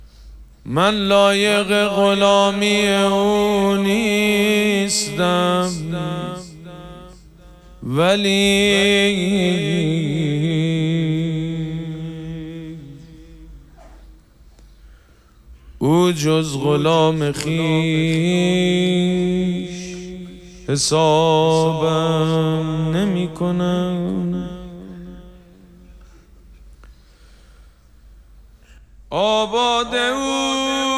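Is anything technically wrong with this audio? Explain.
No, nothing technically wrong can be heard anywhere in this audio.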